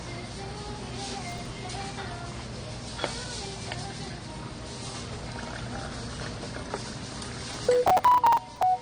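Throughout, the sound is dull and smeared, with nothing above 9.7 kHz. This likely comes from AAC compression at a low bitrate near 32 kbps. From 1.29 to 1.50 s, and again from 7.54 to 8.63 s, processor overload crackle tears the audio. Short buffers of a few milliseconds miss their deadlines. Stale audio repeats with hard edges, heard as gritty crackle.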